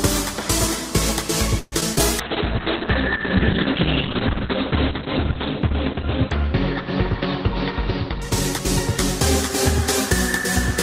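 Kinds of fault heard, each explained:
repeated packet loss (robotic sound): From 1.59 to 2.01 s the sound turns choppy, with four holes, the longest 127 ms, each patched by extending the previous sound.
call bitrate drop: From 2.2 s to 9.25 s the audio turns rough and muffled, losing everything above 4 kHz, which fits an encoder forced from 32 to 6 kbps.
jitter buffer speed-up: Between 7.5 and 9.5 s the audio runs about 3% faster at unchanged pitch, as the receiver trims some 70 ms in pitch-period pieces to cut delay.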